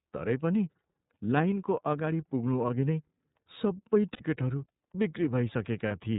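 From the start, the speech carries iLBC codec damage. Nothing above 4 kHz survives. Each frame is coded on its own, and the 30 ms framing points to the 13.33 kbps mode. The result is plainly audible: clear but rough, slightly synthetic speech.

At 4.13 to 4.21 s come lost iLBC frames. The decoder fills about 60 ms by repeating the last pitch cycle mixed with noise. It sounds like a brief held, buzzy vowel, which fits two missing frames. Recovery is immediate.

A second, shorter loss follows at 5.88 to 5.92 s. It covers about 30 ms, which fits a single dropped frame. The same concealment gives a short breathy hold. Because each frame stands alone, the speech comes back cleanly right after.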